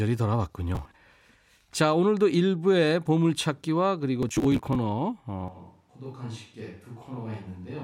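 From 0.75 to 0.96 s, and again from 4.23 to 4.76 s, processor overload crackle rides on the speech. The processor repeatedly missed deadlines for short buffers of around 10 ms, and each missed buffer was skipped, leaving hard-edged gaps that merge into a gritty tearing.

At 5.48 s the sound abruptly turns roomy and hollow, thinner in the bass and roughly 10 dB quieter, with background noise rising to around 35 dB below the speech, continuing to the end. This is likely a switch to a distant microphone.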